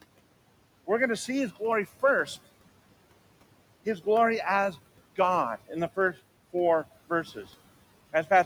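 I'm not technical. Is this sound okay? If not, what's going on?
No. Noise suppressor artifacts run through the whole clip. The suppressor strips out steady background noise. The noise drops away in pauses and creeps back under speech. The room noise itself sits well below the speech.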